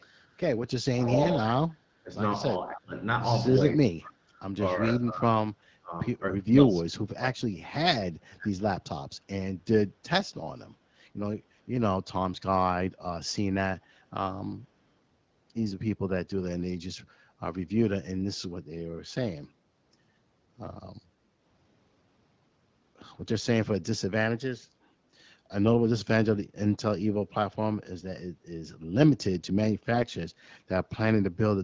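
At the very start, from 0.00 to 0.04 s, there is a faint echo leak. A delayed copy of the sound comes back about 273 ms late, at a very low level, roughly 40 dB under the main signal. It is barely a trace. The likely cause is a far-end loudspeaker whose echo canceller let a small scrap of the pickup through and sent it back.

Next comes speech suppressed in double talk. The level dips at 0.94–2.10 s, 2.55–2.95 s, 3.67–4.30 s, 4.98–5.23 s, 5.41–5.93 s, 6.31–7.83 s and 8.02–8.50 s. The drops vary from shallow to deep. The worst is in the 6.31–7.83 s stretch, where the voice falls by around 40 dB and nearly vanishes. Parts of the talker sound ducked or cut away in pieces. This likely happens because both sides spoke at once and the echo canceller turned everything down.

AMR bit errors appear at 1.22–1.30 s, inside the first dip, then at 21.25–21.27 s and 29.92–30.07 s. The first burst spans a length that fits about four 20 ms frames. 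The last is longer and fits about seven. Flipped bits in the weakly protected parts of each frame throw off the pulse positions and the fine gain and spectrum values. The stream is AMR-WB at 12.65 kbit/s. Pitch and loudness roughly hold, but the voice turns briefly hoarse, scratchy and gargly.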